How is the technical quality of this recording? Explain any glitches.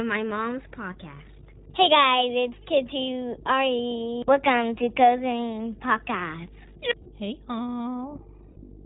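The technical quality is poor. Three separate problems are audible, one of them only in brief glitches near the end.

Mains hum runs throughout. A steady 50 Hz tone sits strongly under the speech, roughly 10 dB below it, from ground-loop or transformer coupling. On a spectrogram it shows as a solid horizontal line at 50 Hz.

The iLBC codec also affects the whole clip. Nothing above 4 kHz survives, and speech sounds rough and synthetic, which fits the 15.2 kbps, 20 ms frame mode. A spectrogram shows a flat ceiling at 4 kHz.

Lost iLBC frames cause two glitches, at 7.02–7.09 s and 8.52–8.58 s. Each lasts about 40 ms, consistent with two missing frames. The decoder repeats the last pitch cycle with noise, so you hear a brief held, buzzy vowel. The waveform shows short stretches of repeated cycles, and the voice recovers almost immediately after each one.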